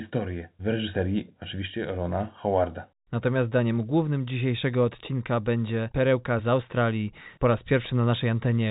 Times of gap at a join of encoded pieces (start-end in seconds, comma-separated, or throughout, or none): none